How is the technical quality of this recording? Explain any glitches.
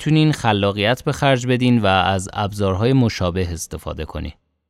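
The technical quality of this recording is sound, with no glitches to explain.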